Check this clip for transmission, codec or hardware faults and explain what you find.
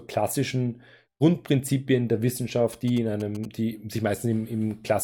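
GSM signalling bursts run from 2.73 to 3.46 s, just before "die sich". They come from a nearby 2G phone exchanging short radio bursts with the network, which the audio circuit rectifies. The result is a galloping ticking with 217 Hz buzz, roughly 20 dB below the speech.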